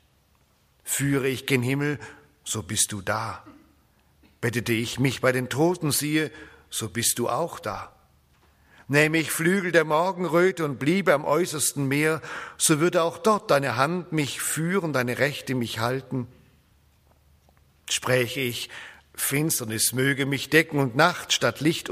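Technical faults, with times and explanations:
No technical faults are heard in this clip.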